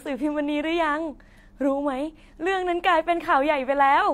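Nothing technically wrong turns up in this short bit of speech; it's just a person talking, with no fault to point to anywhere along the way.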